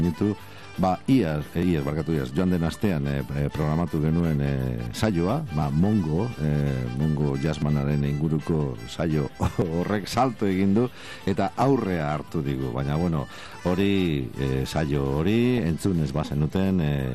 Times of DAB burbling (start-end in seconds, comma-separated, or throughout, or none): 15.58